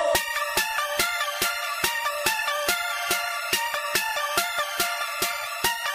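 Nothing stood out on listening.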